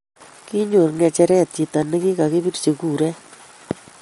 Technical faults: MP3 compression

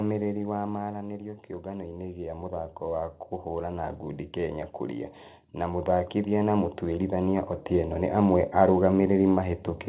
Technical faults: automatic gain falling; automatic gain rising

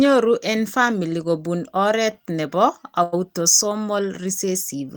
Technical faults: short stall from a late packet

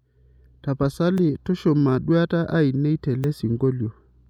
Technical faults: dropped buffer (overrun)

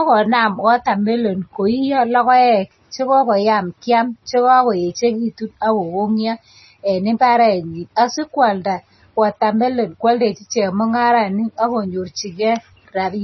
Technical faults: MP3 compression

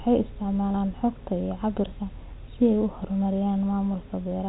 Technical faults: none

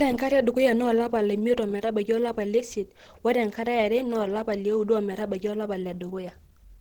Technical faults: Opus compression

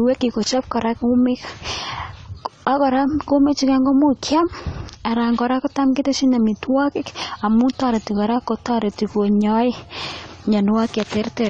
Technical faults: AAC compression

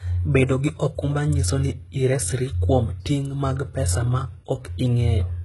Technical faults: HE-AAC compression

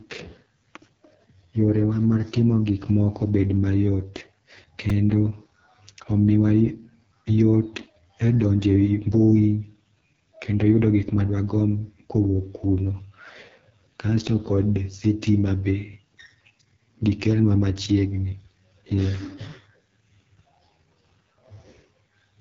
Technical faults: AMR wideband (HD Voice) codec; repeated buffer

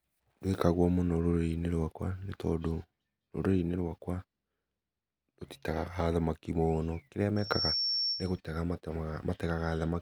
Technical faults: loudspeaker feedback squeal

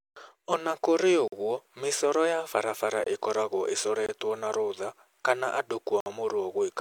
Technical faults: block of digital silence

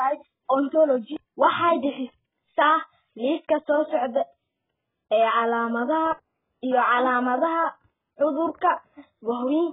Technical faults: AAC compression

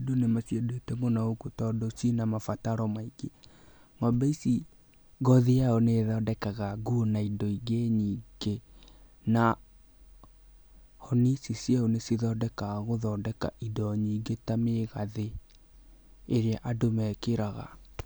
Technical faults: dropped samples

